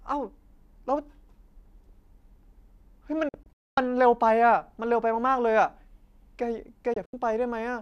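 The speech cuts abruptly to silence in several short holes between 3.29 and 3.78 s, the longest lasting 240 ms, then again more briefly between 6.94 and 7.14 s. This is a digital broadcast dropout: the receiver muted whenever frames were lost or corrupted, discarding that audio.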